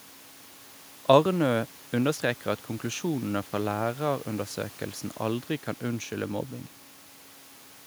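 No audible technical faults anywhere in this speech recording.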